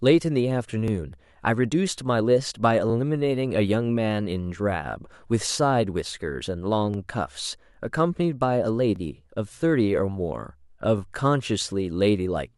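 At 0.88–0.90, 2.90–2.92, 4.92–4.94, 6.94–6.96, 8.96–8.98 and 10.98–11.00 s, overlapping chunks replay 20 ms of speech because each 2 s chunk starts before the last one ended. Each join stutters briefly. The waveform shows a duplicated snippet, and the spectrogram shows a thin vertical seam.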